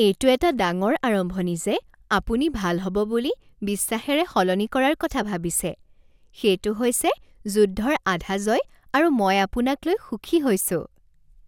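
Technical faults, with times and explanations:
No technical faults can be heard in this speech recording. Nothing in it calls for a timed entry.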